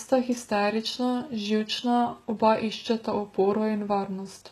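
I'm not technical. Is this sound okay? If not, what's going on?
No. HE-AAC compression, throughout: the treble is likely rebuilt from copied lower tones rather than recorded, so s sounds turn gritty and lispy, with nothing above about 12 kHz.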